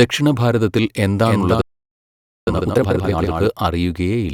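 At 1.26 s a doubled audio track appears. A second full-band copy of the speech runs about 300 ms behind the original, roughly 5 dB quieter, with no decay or room colour. It is most likely a second capture path or an edit holding two copies out of step. It sounds like a hard, dry slapback echo. On a spectrogram the same harmonic patterns show up twice, offset horizontally. The copy starts and ends abruptly, vanishing at 3.47 s.

From 1.61 s to 2.47 s a playback stall cuts the sound off mid-flow for about 0.86 s, and the output goes dead silent. The likely cause is the player running out of data or its thread being blocked. On the waveform this is a flat line. On the spectrogram it is an empty vertical band cutting straight through the speech.

Straight after, from 2.47 s to 3.31 s, time-compressed catch-up plays the backlog at twice normal speed. The player cuts out small pieces of audio and cross-fades the joins, so the pitch stays normal. 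The speech sounds rushed. On the spectrogram the syllables and harmonic contours look squeezed horizontally while keeping their vertical spacing.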